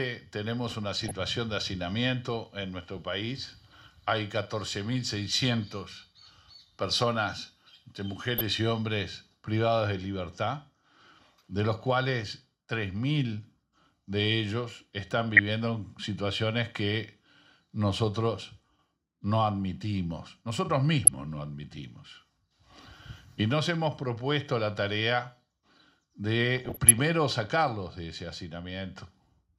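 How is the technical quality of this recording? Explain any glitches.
The recording has five short bursts of DAB burbling, at 0.67–1.11 s, 8.38–8.50 s, 15.29–15.39 s, 21.05–21.08 s and 26.57–26.99 s. The first and last bursts are the longest. Weak reception let bit errors, well under one percent, slip past error correction and corrupt MP2 samples, putting short blips of noise into individual sub-bands.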